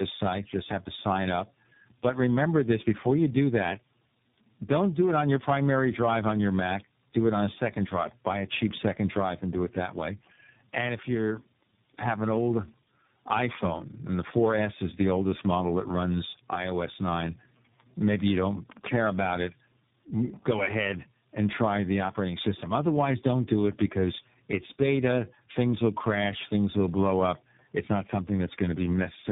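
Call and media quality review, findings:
Tandem speech coding throughout: three speech codecs in series, consistent with CVSD, AMR-NB and iLBC hops. Each re-encodes prior damage, giving rough, warbly, muffled speech, nothing above 3.8 kHz.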